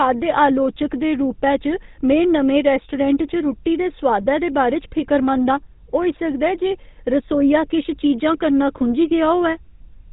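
A buzzy, gravelly roughness sits on the speech from start to finish, with the top end missing. That is the GSM full-rate codec at work. It rebuilds the voice from a vocal-tract model excited by evenly spaced pulses that keep only one excitation sample in three, and passes nothing above 4 kHz. The damage is plainly audible, consistent with the codec's 13 kbps rate.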